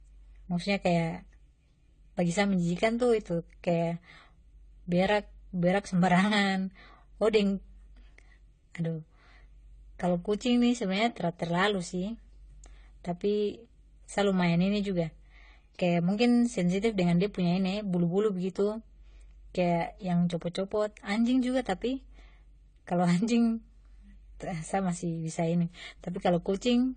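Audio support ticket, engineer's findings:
Speech, throughout: band-limited, nothing above 9 kHz, with two artefact types layered. Likely transcoding between lossy codecs, an HE-AAC pass near 20 kbit/s re-encoded as AAC-LC near 32 kbit/s. A single encode leaves one artefact signature, not stacked ones.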